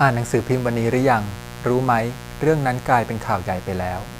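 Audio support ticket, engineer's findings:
Mains buzz, whole clip, start to finish. Raspy, steady, fairly prominent under the speech. 60 Hz supply, harmonics up into the kHz. Probable dimmer, rectifier or unshielded lead; sharp switching spikes twice per cycle leak into the chain.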